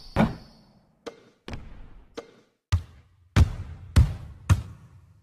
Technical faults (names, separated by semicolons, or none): none